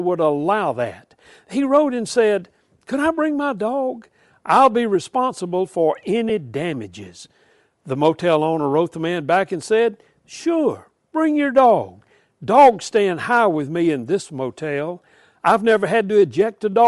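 Bluetooth LC3 compression runs through the whole speech clip, and it is plainly audible. The upper spectrum has been thinned and back-filled with noise, giving the voice a breathy, grainy edge. That is the likely mark of LC3 coding at a modest rate, which fits about 48 kbps with 7.5 ms frames.

Lost LE Audio frames occur at 6.29 s, right after "I'll be responsible for". For about 7.5 ms the decoder repeats the previous spectrum with scrambled phase instead of fresh audio, which fits one missing frame. The result is a brief fill rather than a clean gap.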